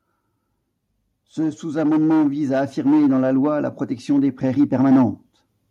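A speech recording with automatic gain rising from about 1.61 s to 5.13 s: the gain control judged the input too quiet and pushed its level up slowly, by about 6 dB over those three and a half seconds, so the voice and the background noise swell together. On a waveform the envelope widens steadily across that span; on a spectrogram the whole frequency range, including the noise floor between phrases, brightens gradually rather than in a step.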